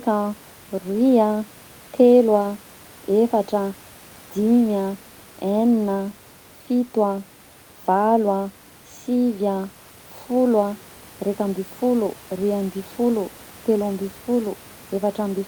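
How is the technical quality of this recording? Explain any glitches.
There are no technical glitches to explain in this recording. Some background noise from the room sits behind the speech at about 27 dB below it, which is part of the recording space rather than a fault.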